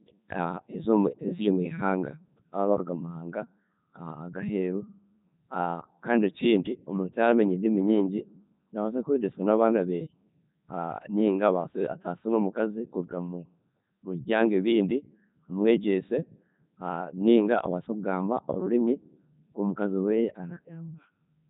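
Codec 2 vocoder coding runs from start to finish, with heavy damage. The decoder rebuilds speech from sine waves using only pitch, voicing, energy and spectral envelope, discarding the real waveform. The voice sounds robotic and buzzy, which fits the 3.2 kbit/s mode.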